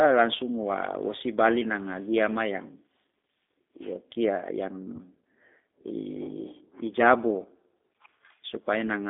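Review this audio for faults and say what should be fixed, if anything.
G.729 codec damage, throughout: the speech is rebuilt from a vocal tract filter and sparse pulses, band-limited to roughly 250 Hz–3.6 kHz, giving a plainly rough, synthetic timbre.

VoIP packet loss concealed by the speech codec, 4.96–4.99 s: about 20 ms went missing, consistent with a single lost packet, and the decoder extrapolated a fading fill whose weakness lingers briefly afterward.

Prevention: carry the call on a wideband or higher-bitrate codec over a network path with jitter buffering and forward error correction so packets arrive intact.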